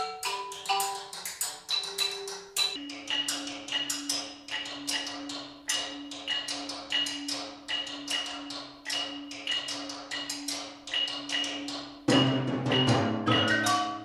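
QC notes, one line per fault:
2.76–14.05 s, wrong sample rate: from 2.76 s the audio plays slow and drops in pitch by about 5.5 semitones, running at roughly 0.73 times normal speed to the end of the clip. The samples are clocked out more slowly than they were captured, with no rate conversion, so duration stretches and every frequency falls together by the same ratio. That ratio fits material recorded at 44.1 kHz being played back at 32 kHz.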